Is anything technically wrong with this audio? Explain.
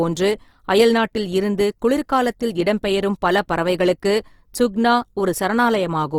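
Yes. Throughout the speech, the audio has likely gone through Opus compression in its CELT mode, short of bits in a way that fits a rate near 24 kbps. Starved bands keep their energy but are filled with folded or noise-like content. The speech therefore sounds plainly grainy and rough, while still reaching up to about 20.4 kHz.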